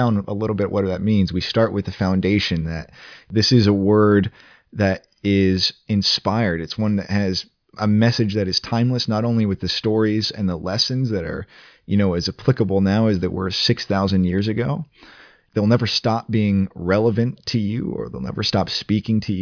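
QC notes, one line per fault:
No faults found on the speech track; nothing to log.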